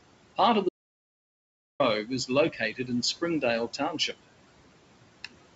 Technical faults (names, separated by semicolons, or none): noise suppressor artifacts; audio dropout to silence; speech cut by the noise suppressor